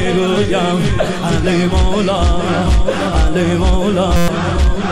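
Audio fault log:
4.16–4.28 s, system hang loop: the system stalled while the hardware kept replaying one 5.8 ms slice of its ring buffer, which fits a 256-sample buffer, 20 times over, so a steady 172 Hz buzz replaces roughly a tenth of a second of sound.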